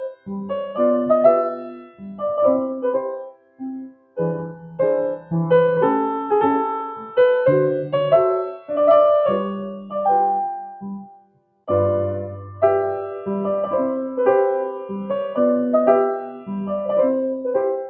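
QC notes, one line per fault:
Throughout: noise suppressor applied to music or sounds. A speech-tuned noise suppressor stays active and treats steady tones, ambience and decay as noise, so gain swings by around 10 dB as it clamps and releases. Onsets pass while sustained material and tails sink, giving a pumping, fluttering, thinned character. On a spectrogram, sustained partials fade in blotchy patches and reverb tails end early. The waveform envelope looks choppy, not smooth. The call path's band limit leaves nothing above 8 kHz.
0.03–0.78, 1.55–2.21, 3.09–3.63, 3.79–4.18, 4.53–4.75, 9.74–9.95, 11.02–11.68 and 16.3–16.49 s: sound cut by the noise suppressor. In these spans the suppressor judges held or decaying sound to be noise and pulls it down more than the rest. The deepest drops are about 19, 16, 21, 20, 7, 9, 21 and 11 dB. Decays collapse abruptly while transients survive. On a waveform these show as sudden envelope dips. 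A spectrogram shows dark gaps cutting across otherwise continuous bands.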